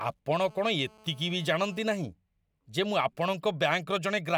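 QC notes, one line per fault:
0.46–1.85 s, GSM phone buzz: a hard, raspy buzz at 217 Hz with a dense stack of harmonics sits about 27 dB below the speech, nearly steady, as a nearby 2G handset on a call pulses its transmitter and the audio circuitry rectifies those radio bursts.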